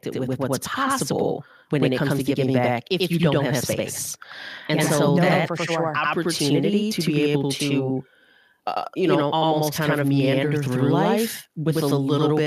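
A speech recording with two faults. Throughout, each sound is followed by a second copy at the same level, about 93 ms later. That is channel delay causing doubling: one channel runs late by a long buffer, which fits a 4096-sample buffer, and the two channels are summed to mono. The result is a constant slap echo. From 0.12 to 1.15 s, automatic gain rises. The voice and background swell together by about 4 dB, because the gain control judged the input too quiet and raised it gradually.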